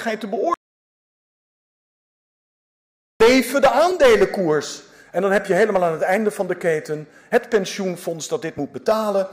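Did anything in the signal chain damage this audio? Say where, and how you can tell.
Yes. There is an audio dropout to silence from 0.54 s to 3.20 s, about 2.7 s where the signal falls to silence with no room tone, then returns mid-flow. The likely cause is lost input at the capture stage, such as a device disconnect, a failed link or a mute in the driver path, while the recorder kept writing silence. Whatever occurred in that stretch is not recoverable.

There is also damaged data in a compressed stream, heard as three brief glitches at 3.90 s, 6.16 s and 8.57 s, each under 20 ms. This points to the codec or storage stage. Corrupted or overwritten bytes in the encoded stream make the decoder misread a frame, so it produces a short burst of garbage until it finds the next valid frame header and recovers sync.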